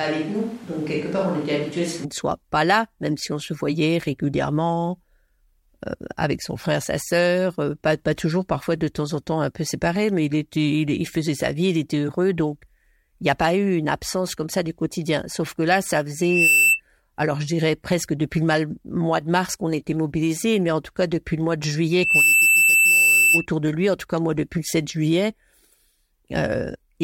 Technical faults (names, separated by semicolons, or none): switch to a distant microphone; loudspeaker feedback squeal